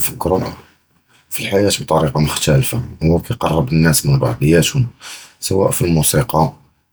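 Nothing in this speech recording points to a technical fault: the signal holds steady, with no audible breaks, distortion or level problems at any point.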